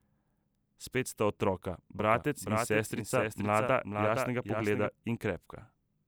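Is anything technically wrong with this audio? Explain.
Yes. From 1.99 s to 4.89 s the speech carries a doubled audio track: a second, full-band copy trails the original by around half a second, a few decibels quieter (about 5 dB down). The likely cause is the same signal reaching the mix twice, once through a slower capture path. The copy has no reverb tail or room colour, so it reads as a flat, overlapping repeat, and it cuts in and out abruptly at both ends.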